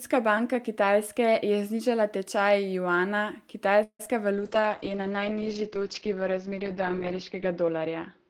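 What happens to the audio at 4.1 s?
A call audio freeze from 3.83 to 4.01 s, likely from delayed packets emptying the jitter buffer, stretches the last sound into a fading buzz or hiss, then about 70 ms of silence. This inserts roughly 160 ms of gap. Right after, short concealed packet loss from 4.05 to 4.08 s drops about 20 ms of audio. The receiver bridges the hole and blends back, leaving a brief smear or wobble.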